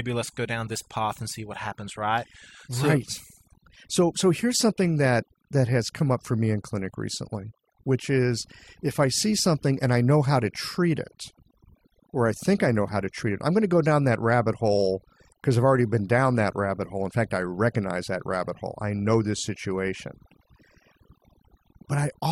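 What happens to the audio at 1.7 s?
At 1.7 s the speech is under overdone noise removal, which runs through the whole clip. The reducer is set too aggressively, so individual frequency bands near its noise estimate are pushed far down or cut, taking quiet parts of the voice with them. Unlike plain low-pass dullness, the pauses fall to near silence sprinkled with twinkling specks.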